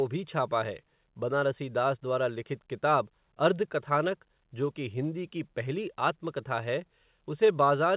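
No technical faults occur in this speech, which comes through a call path that leaves nothing above 4 kHz, as a narrowband telephone codec would.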